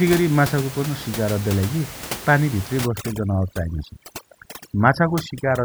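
Overdone noise removal sets in at 2.86 s and runs to the end, at 5.64 s. A noise reducer set far too hard shuts off frequency bands it mistakes for noise, taking quiet parts of the speech with them. The room noise, about 13 dB below the speech, drops and breaks up into twinkling specks.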